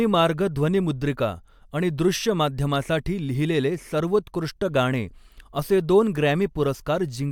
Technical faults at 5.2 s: none

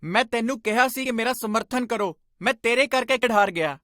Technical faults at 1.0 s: damaged data in a compressed stream

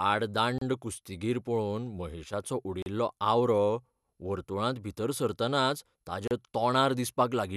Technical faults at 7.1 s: none

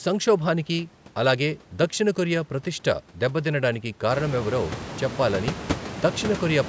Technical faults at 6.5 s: none

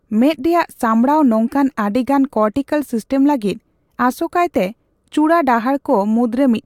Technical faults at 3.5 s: none

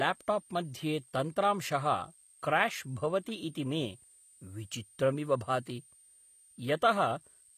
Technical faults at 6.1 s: switching supply whistle; HE-AAC compression

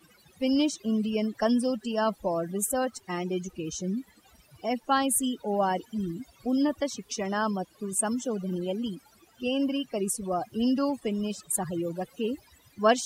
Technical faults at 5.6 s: overdone noise removal

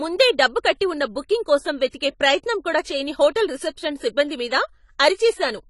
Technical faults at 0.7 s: AAC compression

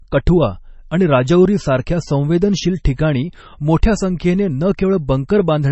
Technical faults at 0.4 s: MP3 compression

